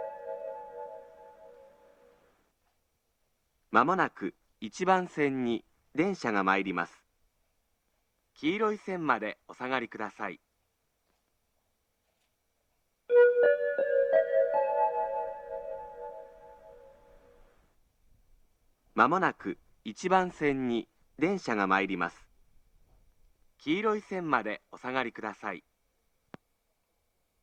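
No technical faults can be heard anywhere in the audio; the signal stays continuous and stable throughout.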